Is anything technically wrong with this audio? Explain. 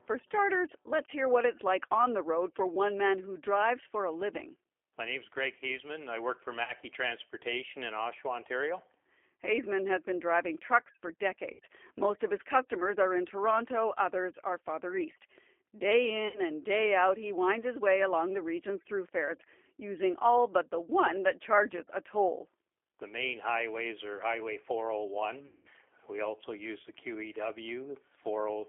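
Yes. Three kinds of fault are audible.

The G.729 codec is present throughout. The speech is carried at 8 kbit/s in a line band of about 300 Hz to 3.4 kHz. The codec rebuilds each frame from a vocal tract filter, a pitch predictor and a few pulses. It does not send the actual waveform. The damage is plainly audible. Speech sounds thin, slightly rough and synthetic. Everything above the band is gone.

VoIP packet loss concealed by the speech codec occurs four times. The first is at 6.64 to 6.73 s, just after "I work for", with 40 ms lost. The second is at 11.53 to 11.60 s, after "been driving trucks for", with 60 ms lost. The third is at 16.28 to 16.40 s, just before "and day out he", also 60 ms. The last is at 25.47 to 25.68 s, with 180 ms lost. During each gap the decoder repeats its last pitch and filter settings at falling gain. The sound smears into a buzzy tone or a coloured noise that fades. 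Speech comes back weak for a moment afterwards.

A loudspeaker feedback squeal runs from 14.88 to 15.71 s. A microphone is picking up a loudspeaker it feeds. At 4.2 kHz the loop gain goes above one, so that frequency keeps amplifying itself. It swells over roughly a third of a second into a single tone. It peaks a few decibels above the speech, then stops.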